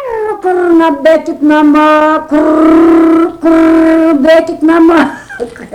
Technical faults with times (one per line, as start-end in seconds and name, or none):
1.16-2.29 drift correction step